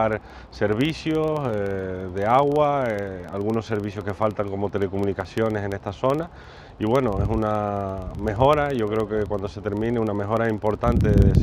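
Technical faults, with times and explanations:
Throughout: filter restarted on every block. The filter drops its stored state at each block boundary and begins again from silence, so a small transient opens every block. These repeat as a steady buzz near 23.4 Hz that rises and falls with the level, which fits a 2048-sample block.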